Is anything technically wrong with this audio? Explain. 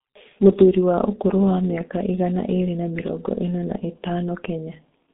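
Yes. G.723.1 codec, throughout the clip: the speech has passed through this early internet-telephony coder, and the sound points to its low-rate mode, around 6.3 kbit/s. The coder works in 30 ms frames and refreshes its model of the voice only once per frame, while the line keeps only about 200 Hz to 3.7 kHz. The damage is heavy: the speech sounds muffled and hoarse, and consonants lose their edges and blur together.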